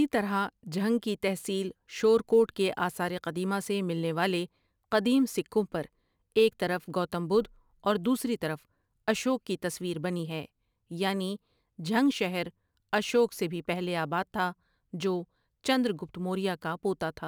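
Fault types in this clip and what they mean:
Sample clock jitter: the converter's timing wanders by a few microseconds, so each sample lands slightly off and steep, loud passages of the speech gain a rough hiss roughly 35 dB below the signal. A spectrogram shows broadband haze tracking louder, brighter syllables, clean in pauses.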